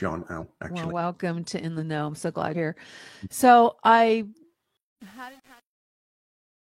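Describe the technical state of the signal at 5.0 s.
At 5.0 s the speech is inside a stretch of truncation distortion on a fade, running from 4.77 s to the end at 6.65 s and worst from about 4.83 s onward. As the fade-out drops the level, the gain stage throws away low bits without dither, which fits an 8-bit word length, so the waveform collapses into coarse steps. The tail sounds gritty. Unlike a noise gate's chatter, the grit follows the fading level itself.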